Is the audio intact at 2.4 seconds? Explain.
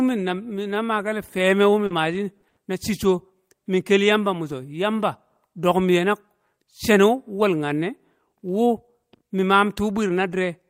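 No. Around 2.41 to 2.45 s there is a brief smear where the sound is stretched rather than heard as it was. This is short concealed packet loss: about 20 ms never reached the decoder in time, so the receiver extended the preceding sound and blended back into the real audio.

Right after, from 2.49 to 2.59 s, the sound is held and fades away before jumping ahead. This is a burst of packet loss: 80 ms were lost, so the receiver continued the last sound while turning it down. When playback resumes, that 80 ms stretch is missing.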